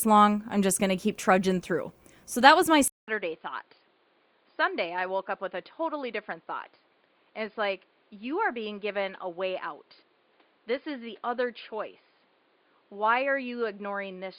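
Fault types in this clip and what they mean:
Input switched to a poorer device: at 2.88 s, after a 200 ms silence, sound dulls, nothing above 4.9 kHz, about 10 dB quieter, likely a microphone change.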